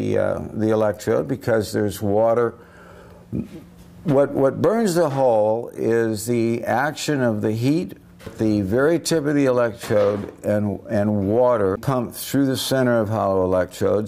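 No technical faults can be heard anywhere in this audio.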